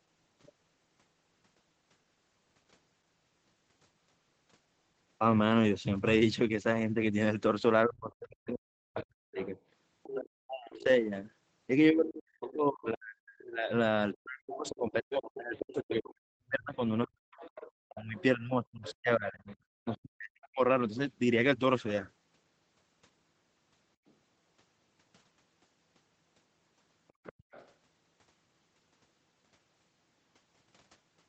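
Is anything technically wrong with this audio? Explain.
Yes, two related problems, both pointing to echo cancellation struggling during a call.

Speech suppressed in double talk, from 7.85 to 10.9 s and again from 11.91 to 20.61 s: the talker's level dips hard, up to about 40 dB at worst. That likely happened because both sides spoke at once and the canceller, unable to separate near voice from loudspeaker echo, turned everything down.

The other side's voice leaking through shows up at 8.99–10.83, 12.48–12.53, 14.67–15.97, 17.05–19.96, 24.08–24.12 and 27.08–27.71 s. It's a faint second voice, roughly 20 to 40 dB under the talker, heard as brief scraps or longer stretches, likely loudspeaker echo the canceller didn't fully remove, all within the call's 8 kHz band.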